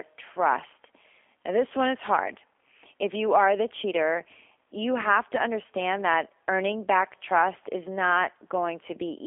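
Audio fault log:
Throughout, G.729 codec: speech rebuilt from a filter, pitch predictor and pulses sounds plainly rough and synthetic, fitting 8 kbit/s; nothing above 3.5 kHz.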